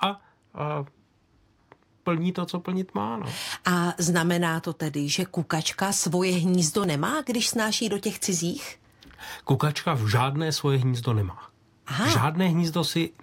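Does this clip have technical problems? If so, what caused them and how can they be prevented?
Yes. At 6.84 s the speech jumps straight ahead with no gap of silence. About 20 ms of audio is missing there. The likely cause is a dropped buffer (overrun). The recording software did not read its samples in time, so the hardware overwrote them. The audio on either side was then spliced together directly. To prevent it, use a larger input buffer and give the recording process higher priority.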